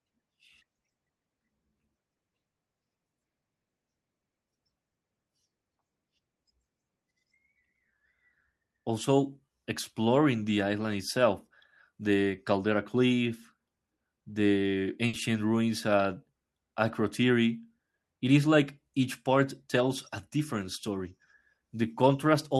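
At 15.07 s the speech breaks up in a burst of packet loss lasting until 15.16 s. About 60 ms of audio never arrived. The receiver stretched the last sound over the gap and faded it. A brief held buzz or hiss results, then speech jumps ahead.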